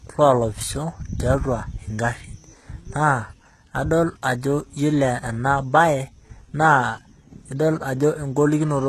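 Throughout, the treble appears rebuilt rather than coded, likely HE-AAC compression at a bitrate near 16 kbps, copying lower bands upward. The damage is plainly audible: the highs sound synthetic and mismatched, with s sounds turning gritty or lispy, and nothing above 12.4 kHz.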